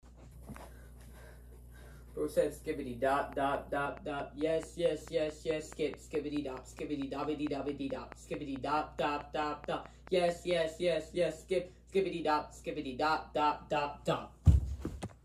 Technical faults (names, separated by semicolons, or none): train of clicks